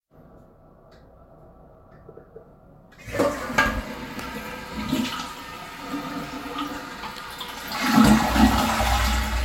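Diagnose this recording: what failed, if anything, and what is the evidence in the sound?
Nothing failed: no stage in the chain, from capture through storage to playback, leaves any audible trace on these sounds.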